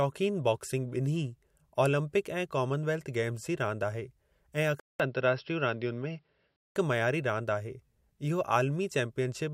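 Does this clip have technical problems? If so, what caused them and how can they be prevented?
Yes. From 4.80 to 6.76 s the speech turns dull and boxy, losing everything above 5.6 kHz. The likely cause is an input switched to a poorer device. A 200 ms silence at the switch and a faint new hiss at unchanged loudness set it apart from a codec narrowing its bandwidth. Locking the recording to a single input device, with automatic switching disabled, would prevent it.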